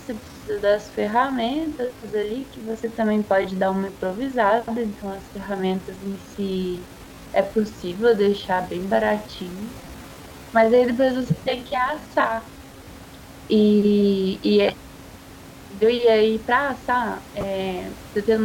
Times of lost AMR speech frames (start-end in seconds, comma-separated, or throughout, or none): none